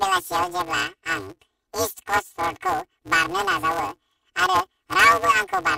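Speech clip affected throughout by planar audio read as interleaved. Each 5.33 ms block, which fits a 256-sample layout, holds one channel's samples followed by the other's but is read as alternating pairs. The short blocks produce a robotic buzz at 188 Hz rather than a clear octave shift.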